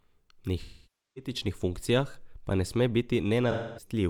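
From 0.60 to 1.31 s, just before "funkcijah pa ne sme", AAC frame loss with concealment leaves a gap of about 0.55 s, consistent with roughly a dozen lost frames. The decoder repeats the last good spectrum with randomised phase, so the sound turns smeared and noisy before fading. On a spectrogram, harmonics give way to a flat, blurred band. The waveform envelope sags. A shorter loss of about 0.26 s at 3.51–3.92 s gives a brief phasey smear.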